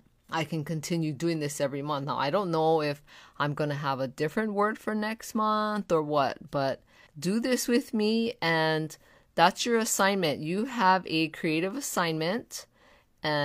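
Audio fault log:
No faults detected.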